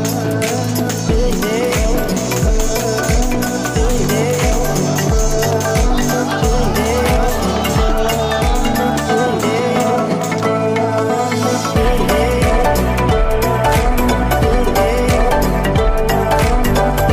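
No technical faults can be heard anywhere in it.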